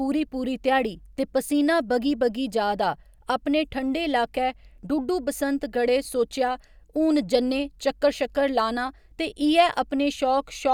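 No technical faults are audible anywhere in this recording.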